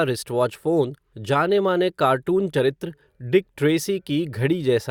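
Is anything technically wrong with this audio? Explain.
Yes. An overlap between stream segments at 2.54 s, just before "चरित्र डिक": the player trims a few milliseconds of sound, and the waveform jumps, heard as a tiny skip.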